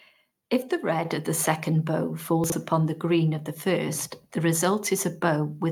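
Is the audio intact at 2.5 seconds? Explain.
No. From 2.44 to 2.52 s the speech briefly turns jumbled, with a short scrambled stretch. This is chunks out of order: one short block of audio, which fits 20 ms chunks, was delivered late and plays about three blocks after where it belongs. Nothing is missing, but the sequence is shuffled, with three abrupt joins.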